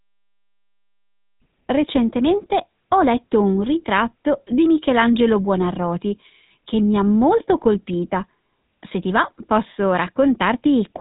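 A buzzy, gravelly roughness runs through the whole speech clip, with nothing above 3.9 kHz: GSM full-rate codec damage, which points to a 13 kbps pulse-excited vocal-tract model.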